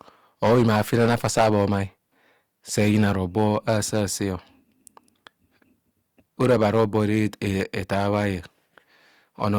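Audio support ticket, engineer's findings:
Hard clipping on speech peaks at 0.43–1.77 s, 2.78–4.01 s, 6.41–7.26 s, 7.61–8.26 s and 9.44–9.58 s. Overdrive was about 12, 6, 10, 4 and 3 dB. The probable cause is an overloaded gain stage or converter. Flattened peaks add high harmonics, giving crackle on peaks, with harsh fuzz in the heavier first and third spans.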